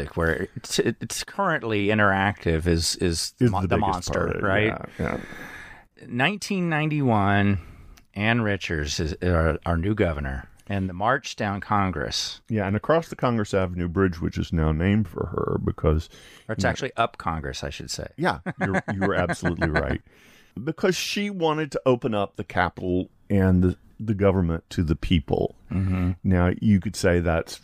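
Listening closely to the speech, nothing stood out as a technical fault at any point.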